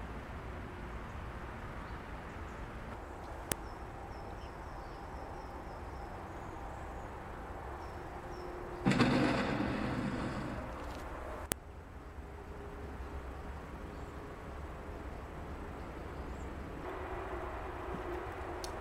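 File header played as audio, at 3.52 s and again at 11.52 s: each is a sharp, loud click or snap lasting only an instant, cutting through whatever the audio is doing at that moment. The two are exactly 8 seconds apart, which fits separate 8-second pieces joined or streamed end to end without stripping their WAV headers. The few dozen header bytes at each join are played as if they were samples, producing the burst.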